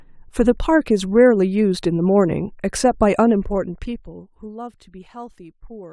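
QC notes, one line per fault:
3.16 to 4.52 s, zipper noise: the level drops by about 20 dB here, but it moves in 1 dB jumps, roughly 30 a second, with no smoothing between them. Every jump leaves a tiny click, so you get a fast ticking or zipping laid over the speech while the fade runs.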